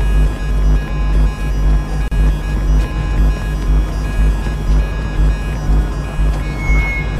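The audio was encoded as separate pieces and spliced back together without trimming the encoder's start-up delay or the padding on each piece's final frame, leaving a gap at a join of encoded pieces. At 2.08 s, continuous sound drops into a gap of about 36 ms, ending at 2.12 s, with abrupt edges softened by codec smearing. The sound then resumes exactly where it broke off. Joins recur every 6 s.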